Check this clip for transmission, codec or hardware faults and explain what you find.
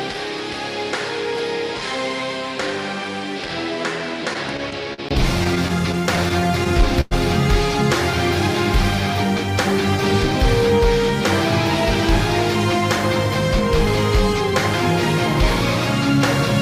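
Two kinds of fault are present: a change of input device over the opening five seconds, and two bursts of repeated stalls.

From 0.0 to 5.11 s the sound is about 10 dB quieter and narrower in band, with a new noise floor roughly 55 dB below the signal. This is likely an input switched to a poorer device, whose own response, level and noise replace the normal path. At 5.11 s a gap of about 20 ms marks the switch, after which the fuller sound returns. A spectrogram shows the upper band cut off and a different floor up to that point. The waveform shows a lower envelope and a short break at the switch.

Repeated stalls (stutter) occur from 4.33 to 5.00 s, with four gaps totalling 85 ms and the longest 43 ms, and again from 5.44 to 7.13 s, with twelve gaps totalling 219 ms and the longest 102 ms. Packets arrived late, so the playback buffer kept running dry, and the receiver extended the last sound until data resumed. 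Nothing is lost, but the audio drags and judders. A spectrogram shows smeared, held slices. The waveform shows repeated cycles, fading in the longer fills.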